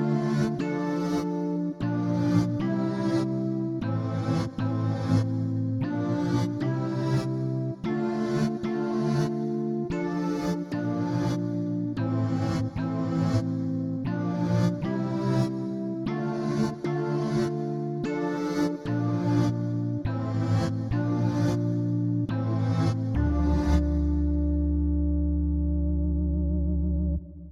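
Listening through the whole recording, nothing stood out as a technical fault.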